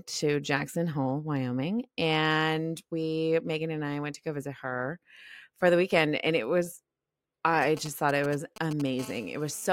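From 7.62 to 8.82 s, galloping groups of short 217 Hz buzzes sit roughly 15 dB below the speech. These GSM signalling bursts come from a nearby 2G phone's radio pulses, rectified by the audio circuit.

From 8.99 to 9.68 s, a steady, raspy 217 Hz GSM phone buzz with many harmonics runs about 21 dB below the speech. It comes from a 2G phone in a call, whose continuous bursts are rectified into the audio.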